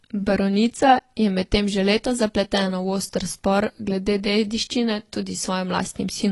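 From start to finish the speech sounds dull and smeared, with a watery, warbling texture on sustained sounds and a fizzy edge on sibilants, and nothing reaches above about 11.5 kHz. This is likely AAC compression: the coder has spent too few bits on each frame, so it drops the top of the spectrum and quantises the rest coarsely, leaving gaps and blur. The damage is plainly audible and fits a low bitrate around 32 kbps.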